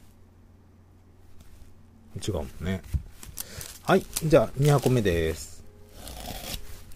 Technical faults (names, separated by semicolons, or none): none